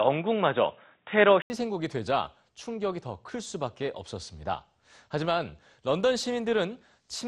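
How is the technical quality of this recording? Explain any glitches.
For the first 1.5 s the speech sounds dull and boxy, with nothing above 3.8 kHz, faint new background noise, and a noticeable level jump after a brief 80 ms gap at 1.5 s. This is likely an input switched to a poorer device, a narrower-band input handing over to a fuller one.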